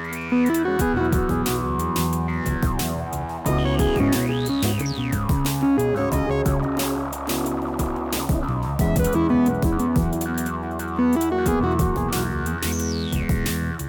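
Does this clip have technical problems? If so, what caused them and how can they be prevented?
No, nothing stood out as a technical problem on listening, so there is nothing here that needs preventing.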